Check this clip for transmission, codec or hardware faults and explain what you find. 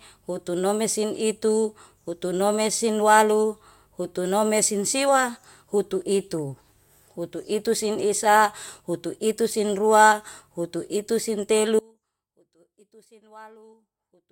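One fault: an audio dropout to a faint residue from 11.79 s to the end, right after "utuitu sin ruautuitu sin". The speech abruptly sinks to a faint leak about 30 dB down, likely because the feed was lost while the path after it stayed live. On the waveform the envelope collapses to a thin band, and the spectrogram fades to faint traces.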